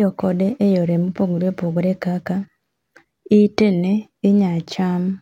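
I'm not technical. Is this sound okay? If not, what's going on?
No. Sample clock jitter runs from 3.79 s to the end of the clip at 5.21 s. The recording device's internal timekeeper wobbles, so each tiny snapshot of the sound is taken a hair early or late, by roughly a millionth or two of a second. Those timing slips turn into a faint hiss or grittiness riding on the speech. It's strongest on loud and sharp, bright sounds and disappears in the pauses.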